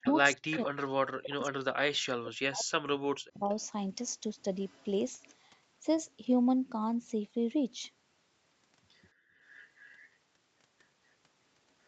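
Speech over a call link, with its top end stopping at 8 kHz, shows speech suppressed in double talk from 0.00 to 3.49 s: the voice dips by as much as around 40 dB for roughly two seconds in total, likely because the echo canceller could not tell it apart from the far end. Echo leak is heard at 0.03–0.63, 1.23–1.27, 3.48–3.65, 4.69–5.33 and 9.56–10.08 s as a copy of the voice trailing by about 200–216 ms, ranging from about 15 dB down to about 40 dB below the speech. The residual echo is likely getting past the canceller. The background is gated by the echo canceller from 9.13 to 9.40 s, dropping by about 38 dB for about a third of a second before returning.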